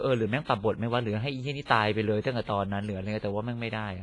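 Throughout the speech there is heavy WMA compression damage, likely from encoding at a low bitrate, which fits about 24 kbps. Nothing remains above 10.6 kHz. Quantisation noise smears across tens of milliseconds, giving a ringing, washy sound with hiss that breathes with the signal.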